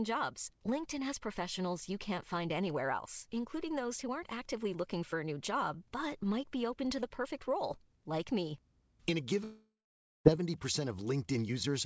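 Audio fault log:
9.44–10.27 s, long network dropout: the speech breaks off and its last sound is stretched into a buzzy tail that fades within a few tenths of a second. About half a second of near silence follows, then speech resumes with roughly 0.82 s of content gone, likely from packets lost in transit. On a spectrogram, smeared repeating bands dim into an empty gap below the 8 kHz ceiling of the G.722 call path; the waveform thins to a flat line.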